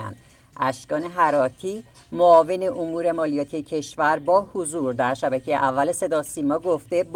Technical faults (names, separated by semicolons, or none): none